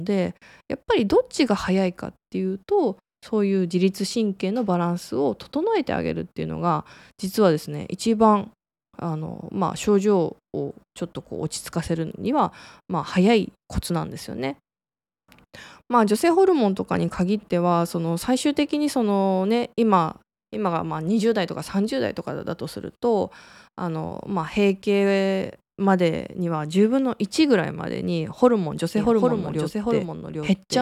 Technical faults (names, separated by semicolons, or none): doubled audio track